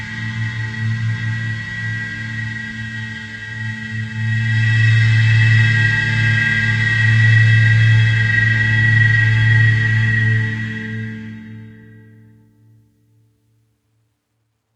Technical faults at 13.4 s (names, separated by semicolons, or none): doubled audio track